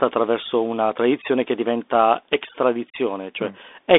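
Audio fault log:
Throughout, Bluetooth CVSD headset codec: the speech sits in a narrow line band of roughly 250 Hz to 3.6 kHz, with nothing above 3.8 kHz. The codec damage is plainly audible. Each sample is one up-or-down bit with an adapting step, which fits a 64 kbps stream. Fast, loud high sounds outrun that step and distort. S sounds turn scratchy, and a granular hiss lies under the speech.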